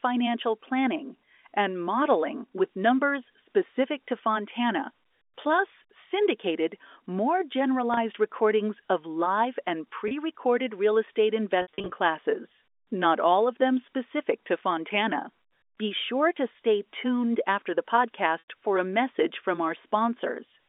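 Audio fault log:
7.94–7.97 s, packet loss with pitch repetition: a brief buzzy hold on the sound, as the receiver repeats the last pitch period to cover 30 ms of missing audio.
10.08–10.11 s, packet loss with pitch repetition: the same short buzzy sustain, where about 30 ms of audio was lost and filled by repeating one pitch cycle.
11.62–11.96 s, packet loss with pitch repetition: a stuttering, repeatedly held and buzzy stretch. 190 ms are lost in scattered gaps over 340 ms, the longest 60 ms, so repeated pitch periods fade before the sound returns.
18.39–18.46 s, packet loss with pitch repetition: a held buzzy note dipping toward silence, then a quick cross-fade back. This is a 90 ms gap, longer than pitch repetition can hide.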